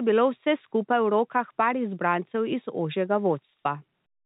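Speech over a G.711 A-law telephone path at 64 kbps, band-limited to 4 kHz as that format requires, with no technical faults present.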